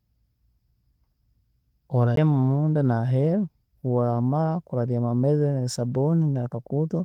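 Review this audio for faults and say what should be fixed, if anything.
There's a CD skip at 2.16 s, just before "munda naheeru". You get a tick and a very short mute, roughly 15 ms, and then the speech carries on from a different point. That's the laser getting knocked or tripping over a flaw and landing on another turn of the spiral, so the player briefly silences output and resumes wherever it landed. The Opus voice compression underneath, running fullband in hybrid mode at 24 kbps, shows only light coding texture and isn't part of the problem. To prevent it, re-rip from a clean disc using a secure, error-checking ripper on a stable, vibration-free drive.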